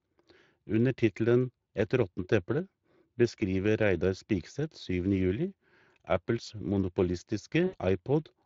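Throughout the speech, the Speex codec leaves a plainly audible hoarse, noisy texture, which fits a middle setting around 21 kbps. On a spectrogram, the harmonics look smeared and grainy, and the band above 8 kHz shows a diffuse, noise-like wash rather than clean detail.

From 7.67 to 7.76 s comes VoIP packet loss concealed by the speech codec. About 60 ms of audio went missing, fitting three 20 ms frames. The decoder extended the last sound, which fades away. The waveform shows a repetitive, shrinking stretch, and the spectrogram shows frozen, blurred harmonics.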